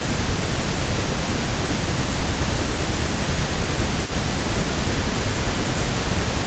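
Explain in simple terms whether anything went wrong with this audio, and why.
Two problems can be heard. Throughout the clip, a faint copy of the speech trails about 0.3 seconds behind the original, noticeably quieter than it. This is an echo leak. The likely cause is a loudspeaker at the other end whose echo canceller let part of the sound back into the call.

At 0.25–0.6 s, 0.88–1.03 s, 2.37–3.12 s, 3.74–3.82 s and 5.4–5.57 s, the speech dips slightly in level for short stretches. This is speech suppressed in double talk. It likely happened because both sides spoke at once, and the echo canceller turned down the talker along with the echo.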